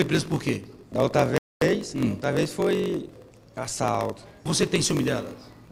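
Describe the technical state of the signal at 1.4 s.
The player ran dry of downloaded audio, a rebuffering stall from 1.38 to 1.62 s. The sound cuts to silence for about 220 ms, then resumes exactly where it stopped. Throughout the clip, a block size mismatch (padded) means one stage writes shorter blocks than the next reads, which fits a 1024-sample read block, and each remainder is zero-filled. The result is a 46.9 Hz buzz, with the audio running at 0.938 times normal speed and the timbre intact.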